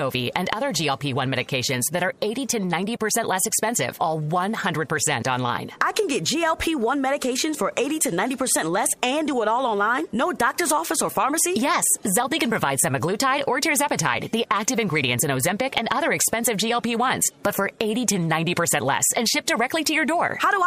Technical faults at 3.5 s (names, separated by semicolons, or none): none